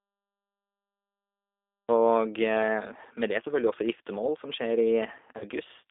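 A speech recording coded throughout with G.729, here the G.729A variant at 8 kbit/s, and the codec damage is plainly audible. The decoder rebuilds each 10 ms frame from a vocal tract filter, a pitch predictor and a sparse set of pulses rather than the actual waveform, so the voice comes out rough and faintly synthetic. The line band runs from about 300 Hz to 3.6 kHz, which removes the low body of the voice and all sibilance and air above that. There is also a cut-off start. From 0 to 1.89 s the file holds only digital silence, and at 1.89 s the speech appears abruptly mid-sound, with no onset or fade-in. That points to the capture or stream beginning after the talker had already started, so the front of that utterance is simply missing. Near the end, between 5.38 and 5.45 s, there is VoIP packet loss concealed by the speech codec. About 30 ms of audio was lost, which fits a single dropped packet. 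The decoder filled the gap by extending its last pitch and filter state at falling gain, so the voice briefly turns into a stretched, fading sound. Because each frame is predicted from the previous one, the speech stays weak or distorted for a short time after real data resumes, which is why the disturbance lasts past the 30 ms actually lost.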